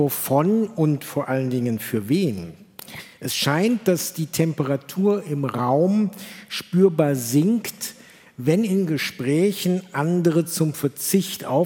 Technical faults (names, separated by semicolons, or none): none